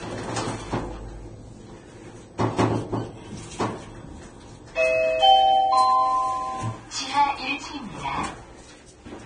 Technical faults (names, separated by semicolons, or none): low-bitrate audio saved at a high bitrate